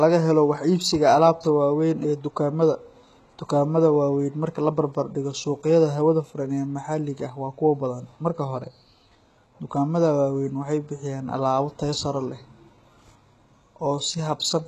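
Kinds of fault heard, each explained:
HE-AAC compression: the treble of the speech sounds rebuilt rather than recorded, with s sounds gritty and metallic. This is likely HE-AAC band replication at a very low bitrate, around 16 kbps. A spectrogram shows coarse, copied-looking upper bands, misaligned harmonics, and nothing above 12.3 kHz.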